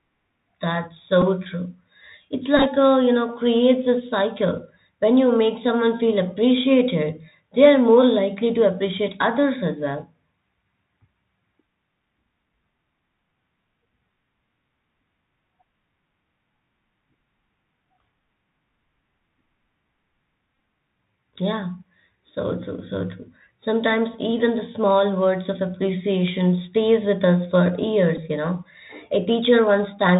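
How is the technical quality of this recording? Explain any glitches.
The recording is narrowband and coded throughout, with a handful of brief buzzy glitches from lost headset packets.

Bluetooth CVSD headset codec, across the whole clip: the speech passes through a one-bit delta coder at 64 kbps, so nothing above 4 kHz survives. The adaptive step lags fast loud changes, which plainly roughens s sounds and leaves a grainy hiss beneath the speech.

Bluetooth headset packet repeated, at 1.22 s, 2.57 to 2.66 s, 20.59 s and 28.17 s: when packets drop, the headset chip replays the previous packet's bits. The 1.22 s event, just before "true it's", and the 28.17 s event, between "stays with us for" and "you know", each cover 7.5 ms. At 2.57 s, right after "true it's" and before "a you know creates", 48.8 ms is lost over 82.5 ms, with the longest run around 15 ms, which buzzes near 267 Hz. The 20.59 s event loses 33.8 ms over 52.5 ms and gives a shorter buzz.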